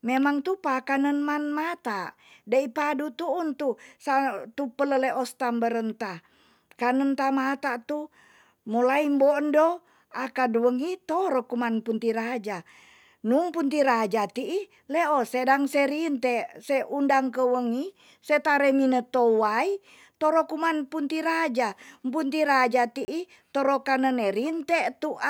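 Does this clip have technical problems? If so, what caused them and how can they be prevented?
Yes, there's one. At about 23.05 to 23.08 s the speech drops out into a block of digital silence roughly 30 ms long. The sound cuts out and comes straight back with no fade, leaving a short hole. That points to the output buffer not being filled in time. To prevent it, give the audio thread larger buffers or higher priority so it never misses its deadline.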